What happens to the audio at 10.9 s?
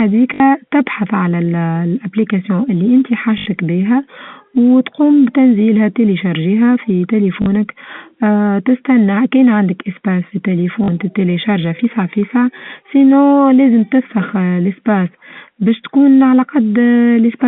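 At 10.84 to 10.88 s the speech hits a brief packet loss with the last packet repeated. About 40 ms of audio went missing, which fits two 20 ms packets, and the receiver filled the gap by replaying the last good packet instead of the lost ones. The short repeat gives a quick robotic stutter within the 200 to 3500 Hz telephone band.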